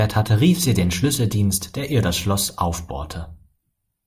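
No technical faults are audible.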